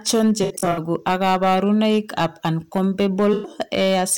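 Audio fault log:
Throughout: hard clipping. Loud syllables carry a harsh, buzzy crackle on their peaks, because the speech was driven about 8 dB past what a stage could pass, so a small share of samples, around one in twenty, were cut flat, adding bright harmonics.
0.43–0.79 s: AAC frame loss with concealment. Just before "ak kaborunoik ab" the speech turns smeared and watery in patches, as about 213 ms of audio went missing in bursts spread over 341 ms, the longest about 70 ms, and the decoder refilled each gap from the last good spectrum.
3.33–3.50 s: AAC frame loss with concealment. About 107 ms of lost audio sounds blurred and noisy rather than clean, because frames were lost and the decoder rebuilt the gaps from the preceding spectrum instead of the real signal.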